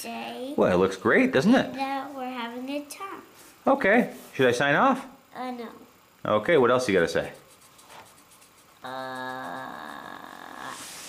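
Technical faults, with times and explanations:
No technical faults detected anywhere in the audio.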